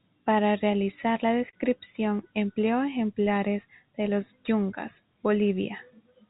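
At 1.5 to 1.55 s, just after "realizar la", there is a short stall from a late packet. A packet missed its playout time, the jitter buffer ran dry, and the receiver held the last sound for about 30 ms before continuing from the same point. No speech is lost, but the held segment sounds briefly stretched with a faint buzz or dip, and everything after it plays about 30 ms later. The speech is band-limited to 4 kHz throughout, consistent with a narrowband G.711 call path.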